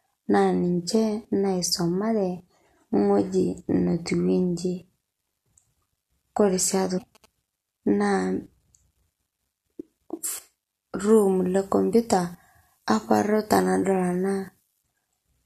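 From 6.74 to 7.26 s, GSM signalling bursts cut in. A 2G phone close by is exchanging short control bursts with the network, not carrying a call. The audio circuitry rectifies the radio energy. What comes through is a galloping dit-dit-dit of short buzzes at about 217 Hz, the burst repetition rate. It sits around 30 dB below the speech.

Inside that stretch, from 6.97 to 6.99 s, there is damaged data in a compressed stream. Some bytes of the encoded audio were corrupted. The decoder cannot parse those frames cleanly. It loses its place and hunts for the next valid frame header. The result is a brief chirp or blip, overlapping the buzzing.

From 11.09 to 14.83 s, pre-emphasis is left on. The treble lift used for transmission was never undone at playback. The curve matches a 50 µs FM characteristic. At 10 kHz the boost is 11 dB relative to 1 kHz. The speech turns thin and overly bright. Sibilants hiss and stand out sharply. 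The low end feels weak by comparison.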